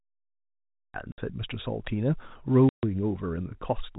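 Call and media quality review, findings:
Cut-off start, 0.00–0.94 s: digital silence, then sound enters mid-event at 0.94 s with no attack or fade. Capture or stream began late, truncating the opening.

Packet loss filled with silence, 1.12–1.18 s (60 ms) and 2.69–2.83 s (140 ms): hard-edged gaps. The lost packets were replaced with zeros, and both gaps fit 10 ms packetisation. The band stays capped at 4 kHz throughout, consistent with the G.711 telephone path.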